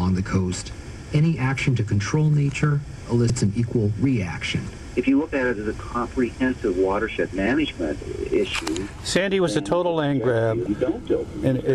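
At 3.27 to 3.30 s and again at 10.63 to 10.67 s, damaged data in the compressed stream gives a 32 ms glitch as the decoder misreads corrupt frames and hunts for sync. Each shows as a brief disruption on a spectrogram and waveform.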